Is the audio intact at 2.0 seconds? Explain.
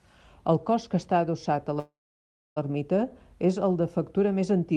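No, 2.0 s falls inside a call audio freeze running from 1.79 to 2.58 s. The jitter buffer likely ran dry while packets were delayed, so the last sound trails off briefly into silence, then resumes where it stopped, about 0.77 s late, with nothing lost.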